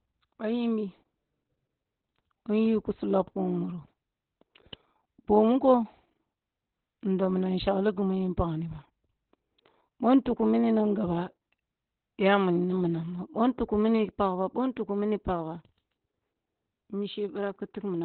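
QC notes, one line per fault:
Throughout: Opus voice compression at low bitrate, heavy damage; narrowband SILK leaves nothing above 4.3 kHz, so speech sounds muffled, hoarse and robotic, with a hard spectrogram ceiling.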